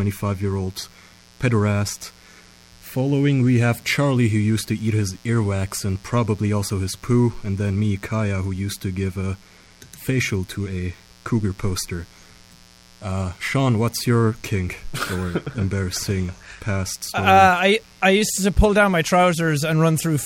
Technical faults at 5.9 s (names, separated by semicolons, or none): mains buzz